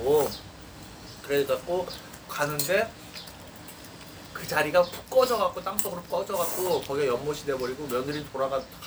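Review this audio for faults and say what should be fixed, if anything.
No faults heard; nothing needs fixing.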